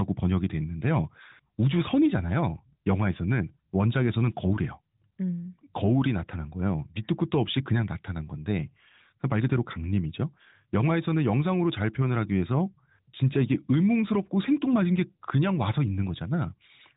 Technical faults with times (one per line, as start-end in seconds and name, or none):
none